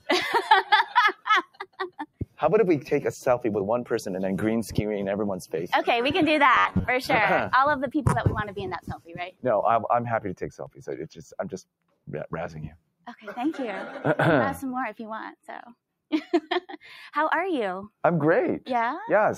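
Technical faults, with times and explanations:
Throughout, noise suppressor applied to music or sounds: a speech-tuned suppressor stays active and keeps treating sustained tones, ambience and tails as noise, so the level swings by about 5 dB. Held material dips while onsets pass intact. This steady pumping across the whole clip distinguishes it from the isolated dropouts.
1.45–2.4 s, 8.81–9.14 s, 9.3–9.45 s, 10.62–10.86 s, 11.1–11.36 s and 12.72–13.06 s, sound cut by the noise suppressor: in these stretches the suppressor takes the sound for noise and pulls it down hard, by about 18 dB at most (about 13 dB at 11.1 s). Decays are cut short while attacks survive, unlike the gentler overall pumping.
6.55–6.88 s, robotic sound from repeated short buffers: the sound becomes a rigid, metallic buzz at 93.8 Hz. The likely cause is a period of about 10.7 ms being looped while fresh audio arrives too slowly, with repeats filling most of this stretch. 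Its fixed pitch separates it from suppressor level drops.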